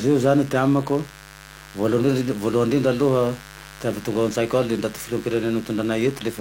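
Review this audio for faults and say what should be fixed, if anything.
A mains buzz runs through the whole clip, sitting roughly 20 dB below the speech. Sharp switching spikes at twice the 50 Hz mains rate carry harmonics well into the kilohertz range, giving a steady, raspy edge. Prevent it with shielded, balanced cabling kept clear of dimmers and rectifiers.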